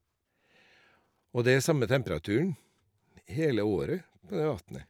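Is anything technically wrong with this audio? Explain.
No, nothing technically wrong can be heard here.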